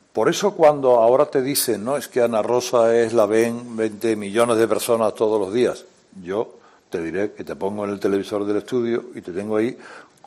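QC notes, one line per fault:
1.55–6.02 s, pre-emphasis left on. The treble lift was applied but never undone, so the top end stands far too high. At 10 kHz the level sits about 11 dB above 1 kHz. The shape of the rise fits a 50-microsecond FM emphasis curve. Low and mid content lose weight against the boosted highs. The sound turns thin, bright and harsh. Sibilant and hissy detail jumps forward until the section ends.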